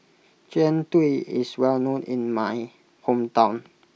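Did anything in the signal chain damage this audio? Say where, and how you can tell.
No, nothing in this speech recording stood out on listening as a sign of damage from any stage of the signal chain.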